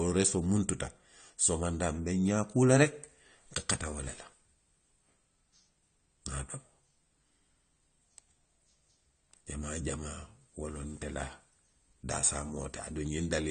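From start to finish, the speech has nothing above 9 kHz, sounds dull and smeared, and sibilants take on a fizzy, warbling texture. The likely cause is AAC compression: AAC-LC at a low bitrate, consistent with about 32 kbps, discarding high bands and coarsely quantising what remains.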